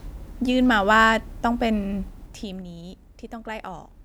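From 2.00 to 2.74 s, zipper noise appears as the speech level drops by roughly 15 dB in 3 dB steps, about five a second, with no smoothing. Each jump adds a small click, so the fade ticks audibly rather than gliding like a smooth fader move.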